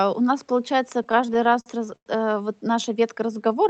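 Repeated stalls (stutter) run from 0.97 to 2.08 s in this speech recording. Packets reached the receiver late, so its jitter buffer kept emptying, and each time it stretched the last sound, fading it on the longest gap of about 102 ms. Roughly 287 ms, about a quarter of that stretch, is filled this way. Nothing is lost, but the speech drags and stutters. A jitter buffer slow-down follows from 3.27 to 3.56 s. To rebuild its reserve, the receiver repeated single pitch periods, adding 54 ms and playing that passage at 84% speed with unchanged pitch, so the sounds there are drawn out. The audio came through an Opus call path whose 8 kHz bandwidth limits the highs, with a moderate bitrate of around 40 kbps.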